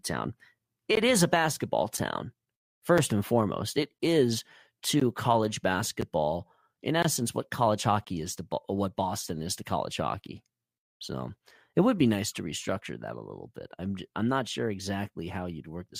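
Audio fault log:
0.95 to 8.07 s, gap between stream segments: the time stamps of consecutive 1-second segments do not quite meet, so the player pads each seam with silence. Hard-edged holes in the speech fall at 0.95, 1.97, 2.98, 3.98, 5.0, 6.01, 7.02 to 7.05 and 8.05 to 8.07 s, lasting 5.4 to 20.5 ms. They recur about once a second, and since nothing is dropped, later sound arrives slightly late rather than missing.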